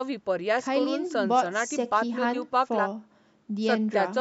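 Nothing here counts as a fault: the speech just carries the usual mark of a call's microphone processing, with the deepest bass trimmed away and nothing above 8 kHz, which is simply how that path sounds.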